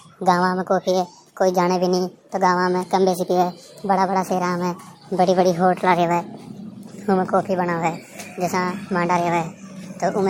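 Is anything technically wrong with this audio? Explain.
Yes, a wrong sample rate throughout. The speech runs 1.5 times fast and about 7 semitones high, which fits 32 kHz audio played at 48 kHz. A spectrogram shows harmonics and formants stretched upward, with events compressed in time.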